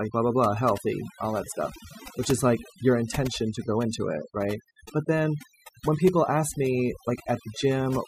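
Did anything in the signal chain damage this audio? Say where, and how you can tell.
Yes. The damage is overdone noise removal at the call-processing stage, and it runs through the whole clip. A noise suppressor set too aggressively attenuates or gates individual frequency bands whenever their level sits near its noise estimate. The background noise is not smoothly reduced. It collapses into isolated twinkling, warbling specks as bands flick on and off. The low-level parts of the speech fall under the same threshold and are removed along with the noise.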